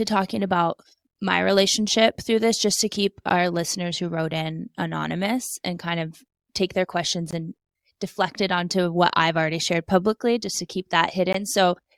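A gap between stream segments at 3.29 s (after "this just to keep"), 7.31–7.33 s (after "take their questions") and 11.33 s (after "publicly just to keep") drops in silence where segments lasting 4 s fail to meet. Each is a hard-edged dropout of about 15–19 ms, showing as a flat waveform notch and a thin blank vertical stripe on a spectrogram.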